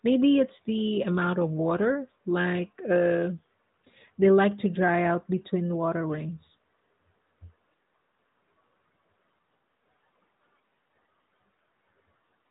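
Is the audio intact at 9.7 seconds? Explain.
Yes, the audio is intact at 9.7 seconds: the speech there carries only the ordinary narrowband sound of the AMR narrowband mobile codec path, with nothing above about 3.8 kHz.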